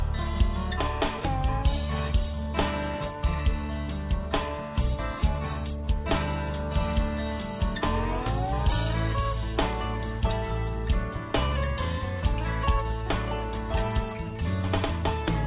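No technical faults can be heard anywhere in the recording.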